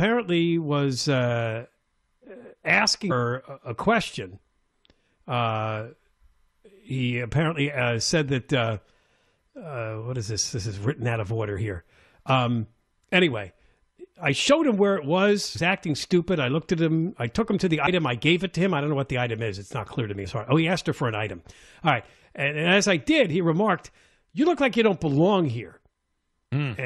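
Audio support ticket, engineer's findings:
Short chirp/blips at 3.10, 15.55, 17.87 and 20.24–20.26 s, each under about 20 ms; damaged data in compressed stream, decoder losing frame sync and resyncing. Spectrogram: thin broadband vertical streaks. Waveform: abrupt glitch.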